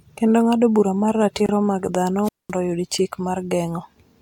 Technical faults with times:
1.46-1.49 gap at a join of encoded pieces
2.23-2.52 wireless microphone squelch dropout

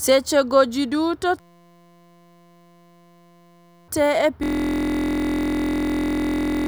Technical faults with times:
1.40-3.88 system hang loop
4.43-6.67 system hang loop

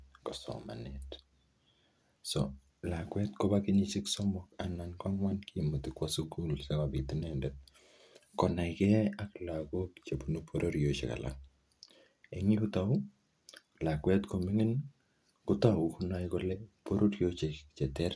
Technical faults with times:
none

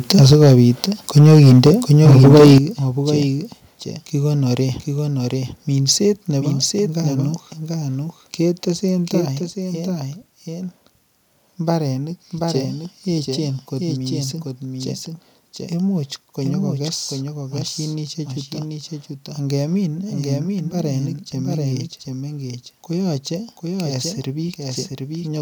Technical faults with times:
0.00-25.42 doubled audio track
0.10-0.84 microphone overload
0.33 microphone volume stepped down
1.16-1.71 microphone overload
2.05-2.58 microphone overload
2.58 microphone volume stepped down
9.21 microphone volume stepped down

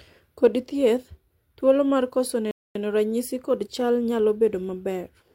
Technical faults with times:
2.51-2.75 rebuffering stall

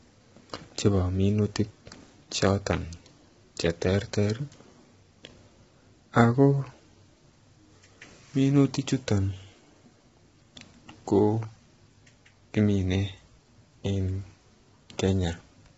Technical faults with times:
0.00-15.78 low-delay AAC compression

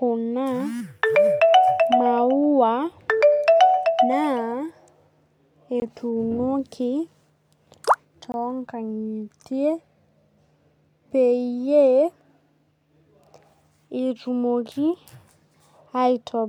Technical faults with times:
5.80-5.82 block of digital silence
8.32 block of digital silence

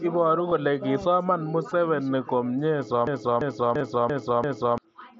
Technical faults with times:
0.50 concealed Bluetooth headset packet loss
1.70 concealed Bluetooth headset packet loss
3.07-4.78 system hang loop
3.78-3.81 concealed Bluetooth headset packet loss

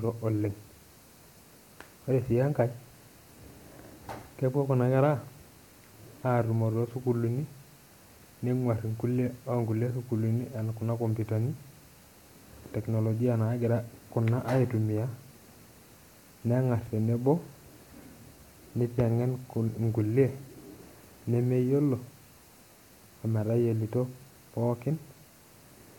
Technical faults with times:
none

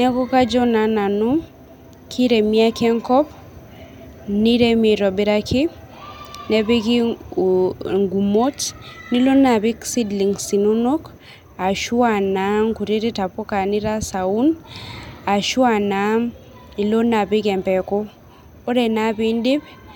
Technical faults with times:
none

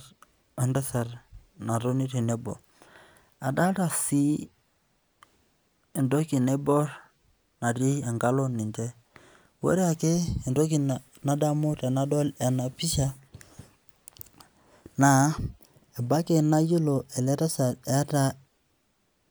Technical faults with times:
none

